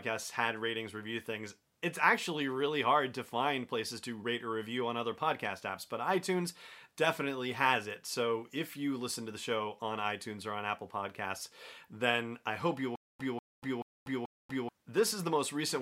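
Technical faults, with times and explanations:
12.96–14.69 s, stutter with silent gaps: right after "I hope you will", the same 194 ms fragment of speech plays four times, each followed by 238 ms of dead digital silence, so it returns at a steady 433 ms pace. This is likely a stalled player or stream replaying its last buffered piece at each retry and then running dry. The fixed repetition and the true silence between bursts set it apart from a single dropout or a gapless loop, and the speech meant for those seconds is lost.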